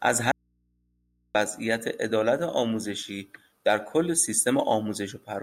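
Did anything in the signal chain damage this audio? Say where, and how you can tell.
Yes. There is an audio dropout to a faint residue from 0.32 s to 1.35 s. The speech cuts out abruptly for about 1.03 s. It is not a pause or a fade. The gap holds only mains hum, roughly 45 dB below the speech level. The path stayed live, because the hum persists through the break. The cause is likely the analogue wiring: a connector briefly lost the signal and left an open input that picked up hum.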